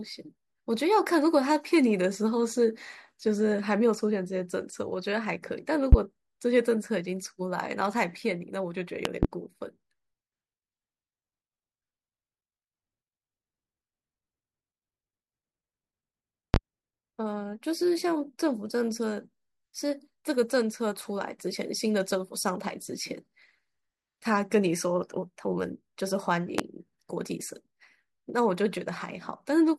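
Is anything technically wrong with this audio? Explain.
Yes. Loud pops occur at 5.92–5.96 s, 9.05–9.27 s (a double pop), 16.54–16.58 s and 26.58–26.62 s. Each is a sharp burst roughly 20 dB above the speech, which continues underneath. A sudden voltage step, likely from a switch, static or a driver glitch, causes them.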